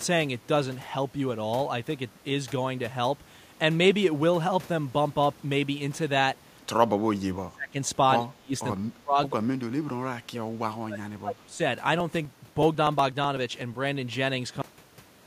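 Between 6.83 and 11.61 s the speech is pulled down in four stretches: 6.83 to 7.77 s, 8.19 to 8.54 s, 8.73 to 11.02 s and 11.19 to 11.61 s. The level sinks by roughly 25 to 35 dB, with the deepest dip in the first stretch, and comes back between them. This pattern points to speech suppressed in double talk, with the likely cause an echo canceller that could not tell near-end speech from far-end echo during overlap and attenuated both.

From 11.88 to 13.74 s there are periodic USB or driver dropouts. About fifteen small gaps occur, evenly spaced every 0.124 s. Each one loses about a millisecond of audio. The lost samples are skipped, not replaced with silence, so the waveform jumps across the gap and produces a regular tick on every beat while sound is present. That fixed spacing fits a background task that stalls the bus or driver at a set interval.

At 14.62 s the audio has a cut-off end. 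It stops mid-sound and falls straight to digital silence with no natural decay. Everything after that point is silent. The final stretch of the recording was never written out, so the closing buffers were lost rather than faded or trimmed cleanly.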